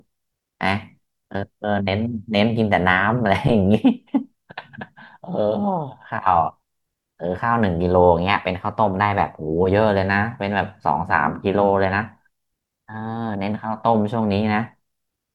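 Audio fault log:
8.17–9.70 s and 12.36–13.52 s, drift correction step: the speech twice lurches faster and sharper by about a semitone (99 cents, a 5.88% speed rise), holds there, then drops back, likely a clock-matching resampler abruptly changing rate to manage its buffer, shifting speed and pitch together.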